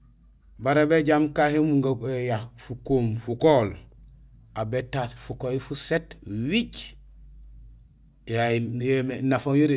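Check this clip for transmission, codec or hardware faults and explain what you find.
No transmission, codec or hardware faults can be heard; the speech signal stays continuous and stable in level and timing throughout.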